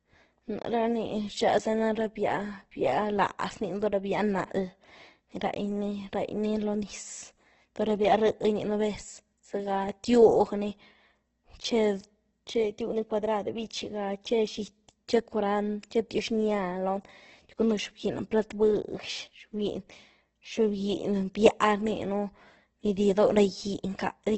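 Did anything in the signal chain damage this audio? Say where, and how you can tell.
Yes, at the codec stage: Opus compression, likely at a very low bitrate around 12 kbps, runs throughout this speech. Nothing reaches above 8.1 kHz, and the damage is heavy, with tones turned rough and grainy rather than the swirling holes that MP3 leaves.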